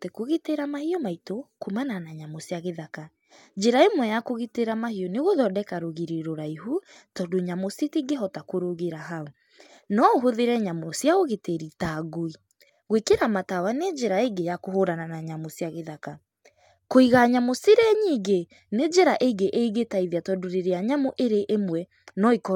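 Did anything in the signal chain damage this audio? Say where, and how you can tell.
No, nothing in the signal chain damaged this audio.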